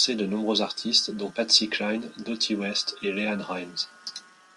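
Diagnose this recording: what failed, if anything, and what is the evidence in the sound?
Nothing failed; no audible faults.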